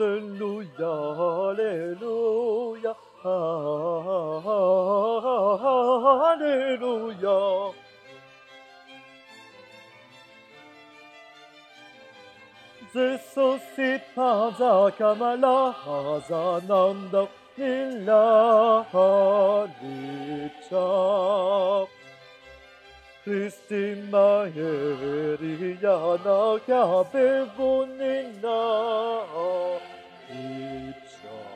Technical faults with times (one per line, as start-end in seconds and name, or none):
none